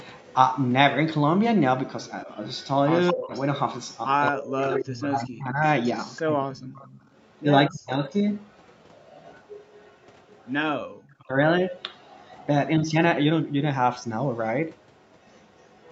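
From 0.04 to 0.33 s, a faint delayed copy of the speech sits about 30 dB under the direct sound, trailing it by 220 ms. The likely cause is an echo leak, where the far end's echo canceller let part of its loudspeaker pickup back into the call. It returns at 2.07 s and continues to the end at about 25 dB down. On a spectrogram it shows as weak ghost harmonics offset 220 ms to the right of each syllable. In the waveform it appears as a low-level smear filling the gaps.

Between 2.25 and 8.1 s, the talker's speech dips and breaks into pieces while the echo plays over it, for roughly 2 s in total and by as much as 30 dB. This is speech suppressed in double talk: the canceller likely treated the overlap as echo and attenuated everything. The waveform shows chunks carved out of the envelope, and the spectrogram shows vertical gaps where the upper harmonics thin first.

At 10.83 to 10.96 s, the room tone collapses by about 40 dB for roughly 150 ms and then snaps back. 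This is background gated by the echo canceller, which clamped the microphone while the loudspeaker was active. It appears as a near-silent notch in both the waveform and the spectrogram, which stops at 8 kHz throughout.

At 11.24 to 11.35 s, a short second double-talk suppression removes about 0.1 s of speech by around 25 dB, again likely from the canceller mistaking overlap for echo. It shows as a brief hole in the envelope.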